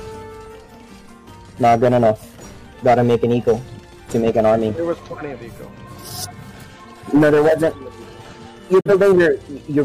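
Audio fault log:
8.80–8.90 s, digital broadcast dropout: the sound fades out over about 8 ms, sits silent briefly, then picks up again further along, with roughly 43 ms of programme simply gone. That's the receiver muting after a frame fails its checksum or the signal drops, which fits a single lost frame. It's a fast fade rather than a hard click, and it doesn't resume where it left off because whatever was broadcast during the hole never arrived.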